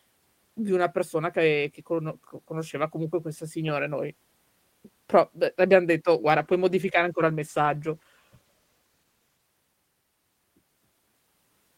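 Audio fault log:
6.34–9.49 s, call bitrate drop: the speech turns rough and coarse and stays degraded for about 3.1 s before clarity returns at 9.49 s. The loss in detail fits the encoder's bitrate being cut from 32 to 16 kbps after the call's bandwidth estimate fell. With half the bits available, the codec quantises the spectrum more crudely and discards finer detail, leaving a grainy, smeared quality until the rate recovers.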